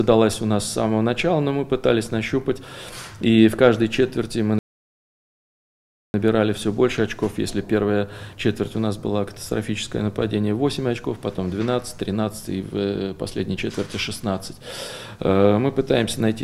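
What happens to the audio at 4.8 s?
At 4.8 s you're right in the middle of a playback stall: the sound cuts out abruptly at 4.59 s and stays silent for about 1.55 s, picking up again at 6.14 s. That's likely the player running dry of buffered data, or its playback thread getting blocked, so nothing reached the output until it caught up. It's a clean dropout, not a fade: the flow just freezes, then resumes.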